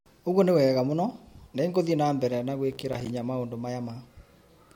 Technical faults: processor overload crackle

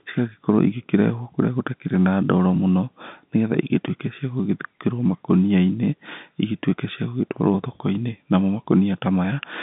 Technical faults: none

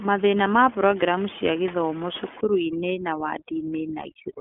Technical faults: USB whine; iLBC codec; overdone noise removal

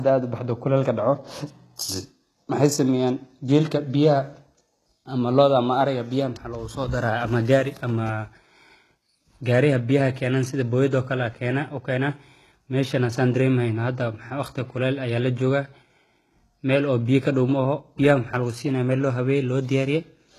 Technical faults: low-bitrate audio saved at a high bitrate

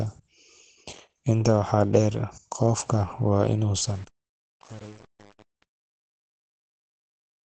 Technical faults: Opus compression; truncation distortion on a fade

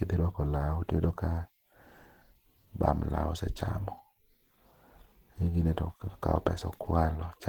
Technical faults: Opus compression

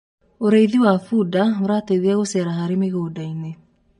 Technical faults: channel delay (comb filtering); MP3 compression

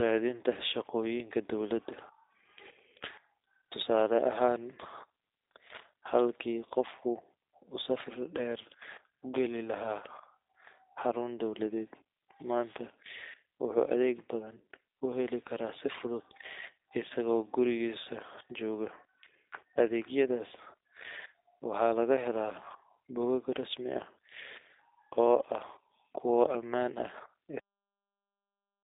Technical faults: G.729 codec; cut-off end

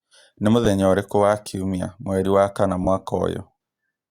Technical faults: lost LE Audio frames

